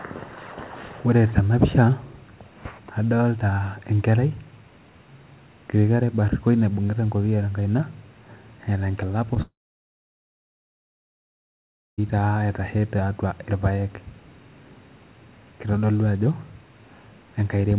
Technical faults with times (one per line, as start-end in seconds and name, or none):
9.34-9.38 short concealed packet loss
9.42-12.00 long network dropout